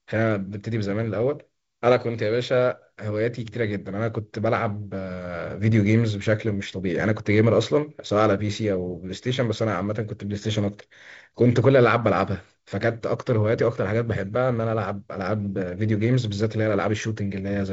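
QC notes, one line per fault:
The speech is carried by G.722 wideband telephone coding, with content reaching up to 7.7 kHz and nothing above, and the slightly grainy texture in both bands fits the codec running at 48 kbit/s, where the lower band has fewer bits to work with.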